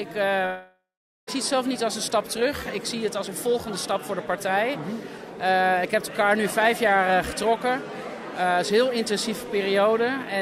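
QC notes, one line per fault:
0.45 to 1.29 s, long network dropout: the sound cuts out and what's left is a buzzy, hissy smear of the last bit of audio, fading away until roughly the final 0.44 s is just silence. About 0.82 s of material is simply gone, and the audio picks up again further along with no catch-up. That pattern points to a stalled stream, likely a network dropout, where the receiver's concealment stretched the last sound before giving up.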